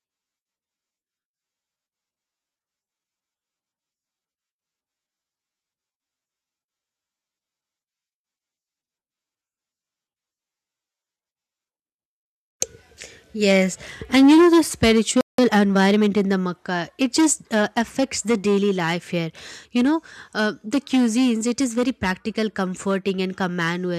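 At 15.21 s the speech cuts out in mid-flow and stays silent until 15.38 s, a gap of about 176 ms. This playback stall most likely comes from the player's buffer running dry or its output thread being blocked, so no samples reach the output.

From 15.38 s to 16.08 s the speech runs at 1.25 times normal speed with its pitch unchanged. This is time-compressed catch-up: the player drops short segments and cross-fades across the joins to work off its backlog.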